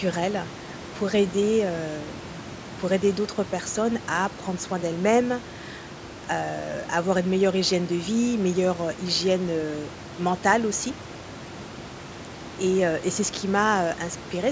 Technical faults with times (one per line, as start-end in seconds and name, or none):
none